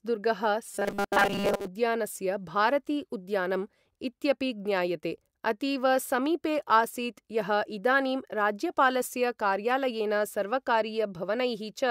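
In this speech recording, audio likely arrived too slowly, so short buffers, about 5 ms, were replayed. From 0.66 to 1.67 s, this robotic sound from repeated short buffers imposes a rigid, metallic 200 Hz buzz across most of the passage.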